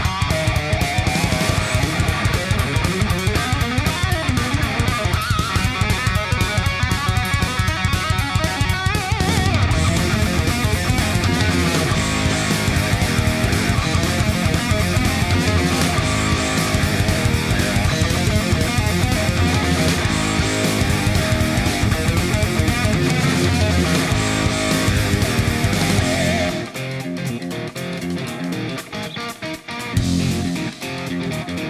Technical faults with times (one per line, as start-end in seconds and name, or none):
none